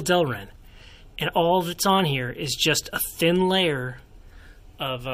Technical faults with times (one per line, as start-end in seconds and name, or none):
none